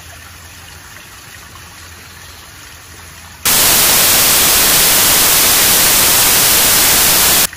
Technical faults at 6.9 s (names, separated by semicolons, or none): samples built from the wrong bytes